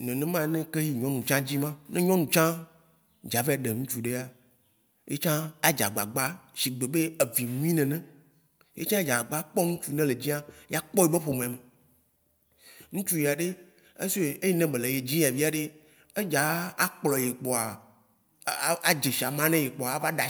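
No technical faults can be heard anywhere in the recording.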